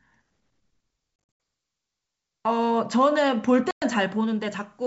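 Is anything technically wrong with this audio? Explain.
Yes, packet loss on an ADPCM call. Around 1.16 to 1.40 s, 180 ms of sound drops out in hard-edged gaps of up to 80 ms. At 3.71 to 3.84 s, a 110 ms gap follows. The adaptive decoder loses step with the sender, so unlike a clean dropout the sound returns slightly distorted and settles within tens of milliseconds.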